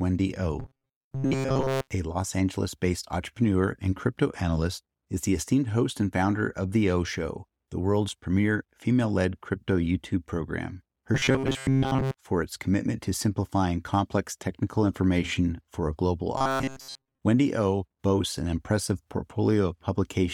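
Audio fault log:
0.60–1.91 s, 11.15–12.17 s and 16.38–17.19 s: robotic sound from repeated short buffers. The speech turns into a stiff, metallic buzz pinned at about 134 Hz, though you can still roughly follow its shape. That's likely the playback running short of fresh audio and looping the same tiny chunk, about 7.5 ms long, to fill the gaps. Most of the real signal gets skipped, and the steady loop rate forces that fixed pitch.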